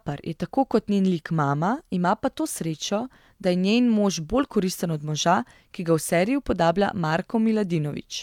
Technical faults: none

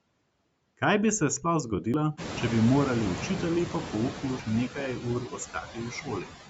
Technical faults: noise suppressor artifacts; audio missing between chunks; noise suppressor catching up; speech cut by the noise suppressor

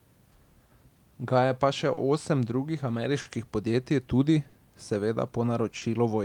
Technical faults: clock drift between sender and receiver; short stall from a late packet

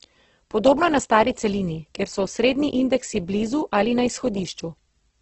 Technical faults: Opus compression

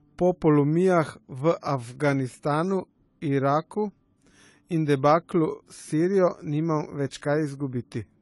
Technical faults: AAC compression

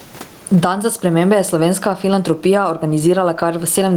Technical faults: gain pumping

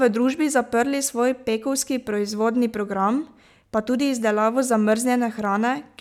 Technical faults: none

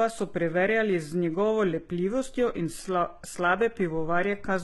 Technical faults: HE-AAC compression

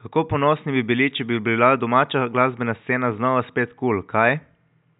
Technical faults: none

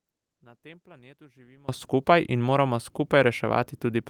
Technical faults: one channel inverted

